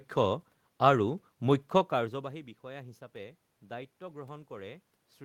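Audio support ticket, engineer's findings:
No system faults found in this speech clip. Room noise sits under the recording throughout, and the level shift around 2 s is the talker moving relative to the mic.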